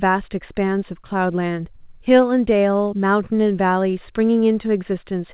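No technical faults can be heard in the speech, which carries nothing above 4 kHz, consistent with a WebRTC call path using the G.711 mu-law codec at 64 kbps.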